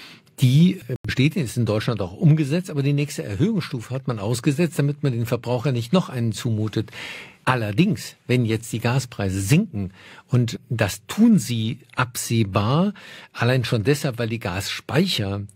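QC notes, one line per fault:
0.96–1.09 s, corrupt frame muted: right after "die äh" the speech drops abruptly into a 130 ms gap of pure silence, and resumes at "ist in". Damaged compressed frames were rejected by the decoder, and the player substituted silence for each one. The gap's length points to roughly three consecutive frames. The surrounding speech keeps its timing, so nothing is shifted. It is simply missing, which is why it sounds like a hard hole rather than a stutter.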